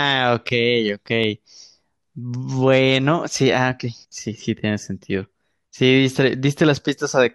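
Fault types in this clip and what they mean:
CD scratch ticks: A scratch or blemish on the disc wipes out more data than error correction can rebuild, and the player patches the damage by interpolating or muting samples. The damage returns on each turn of the disc. In this speech clip, five brief ticks fall between 0.89 and 1.58 s, the longest lasting about a millisecond. On a waveform they appear as tiny spikes or gaps, and on a spectrogram as thin, evenly spaced vertical lines.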